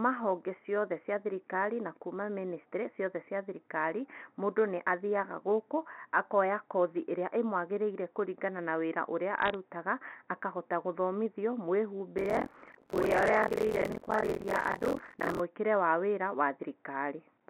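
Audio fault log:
9.42–9.54 s, bit errors on a digital phone line: Just after "kũringana na wĩra ũrĩa" a brief burst of crackle sits over the speech. Flipped bits in the mu-law stream each corrupt a single sample. Where a flip lands on the sign or an upper bit, that sample jumps far from its neighbours and produces a sharp tick. With an error rate of roughly a fifth of a percent, the ticks cluster into crackle while the underlying speech stays intact.
12.17–15.40 s, buffer tearing: A steady robotic rattle at about 43 Hz rides on the speech for just over three seconds, which fits a 1024-sample buffer. The software filling the ring buffer and the hardware draining it have drifted so their positions cross inside each period. Roughly two-fifths of every buffer replays audio from about 50 ms earlier. The hard joins on either side repeat once per buffer, producing the buzz, which sounds only while there is signal.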